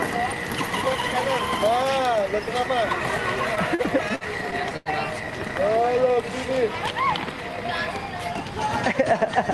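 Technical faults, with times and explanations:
3.55–4.89 s, repeated stalls (stutter): seven brief holds totalling 221 ms, the longest 90 ms, fill about 17% of this span. Late-arriving packets kept draining the jitter buffer, so the receiver stretched the preceding sound rather than dropping anything, making the passage drag and stutter across the Opus-coded call audio band-limited near 12 kHz.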